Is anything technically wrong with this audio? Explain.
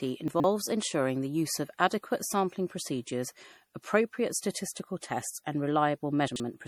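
Yes, two faults. Throughout the speech there is generation loss: swirly, hollow, smeared tone with blurred attacks, worse than one MP3 pass near 64 kbit/s explains, likely from about five re-encodings on shifting frame grids.

Chunks out of order occur at 0.28–0.44 s, just before "ensuring the use of", and at 6.28–6.4 s. A 40 ms chunk plays three and then two chunks late, giving a jumbled moment. Unlike dropouts, no sound goes missing.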